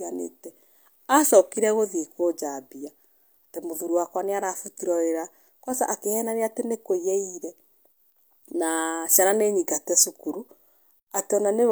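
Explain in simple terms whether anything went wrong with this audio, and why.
Nothing went wrong with this audio, because there are no technical faults to hear anywhere in the recording.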